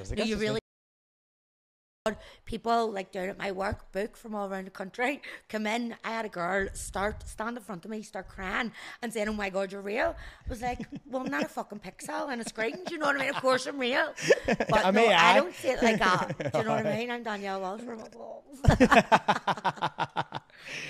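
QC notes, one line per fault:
0.59 to 2.06 s, audio dropout to silence: the sound cuts off mid-flow and is replaced by about 1.47 s of silence, with no room tone underneath, before returning just as abruptly. The likely cause is the input being lost, a disconnected device, failed link or stray mute, while the recorder kept writing silence. On the waveform it is a flat line; on the spectrogram, a dark vertical band with hard edges.
13.08 to 16.12 s, USB whine: a steady, fixed-pitch tone at 1 kHz sits under the sound for about 3 s, at roughly 30 dB below the signal. It comes from the USB bus drawing current in 1 ms frames, with that 1 kHz pulse leaking into the audio through power or ground. On the spectrogram it shows as a thin, perfectly horizontal line at 1 kHz starting and stopping with the interval; on the waveform it is barely visible, only a faint thickening of the trace.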